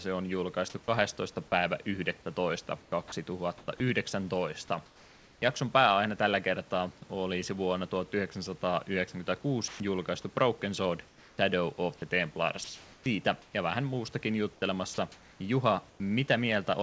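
Speech carried over a call path with nothing above 8 kHz, consistent with a wideband codec such as G.722, over a faint room-noise floor. Sound chopped by the voice detector at 2.82–3.80 s: about 260 ms of quiet speech edges flicker into synthetic fill, likely from the sender's voice detector repeatedly toggling transmission. Comfort noise in place of the background at 4.86–5.42 s, 9.68–9.80 s, 11.08–11.38 s, 13.42–13.54 s and 14.54–16.00 s: the real background turns flat and featureless, with level shifts of about −2, +1, −9 and −1 dB in the first four, likely because the sender paused transmission and the receiver generated noise. Onset clipped by the voice detector at 11.33–11.38 s: speech resumes abruptly, about 50 ms of its soft start missing, likely from the detector reacting late. Sound dropped by the voice detector at 14.94–14.98 s: about 40 ms of speech gives way to steady noise, likely because the detector mistook it for background.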